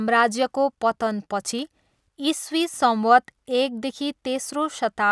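Nothing goes wrong anywhere in this bit of speech; there are no glitches, dropouts or other technical faults to point to.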